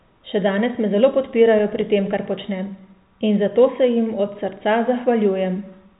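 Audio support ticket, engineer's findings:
Listened through the speech over its G.711 telephone-band path and nothing stood out.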